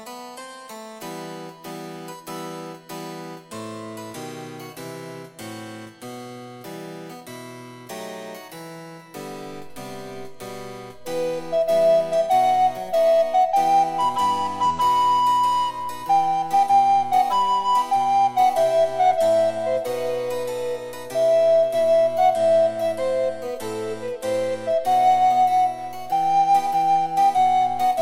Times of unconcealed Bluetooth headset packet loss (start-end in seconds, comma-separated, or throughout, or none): none